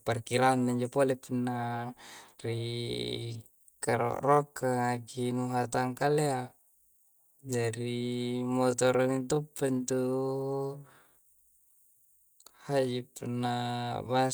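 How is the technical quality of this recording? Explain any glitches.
The recording has one glitch. From 2.87 s to the end, it is a time-stretched section: software likely slowed the audio to about 0.64 times its speed, repeating short pieces to keep the pitch. The pace suddenly drags while the pitch stays unchanged.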